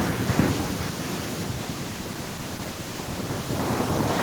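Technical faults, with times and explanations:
1.45–4.23 s, call bitrate drop: the bandwidth estimate fell and the encoder coded far more coarsely, which fits about 64 down to 14 kbps. The speech turns rough and muffled as the highs are cut.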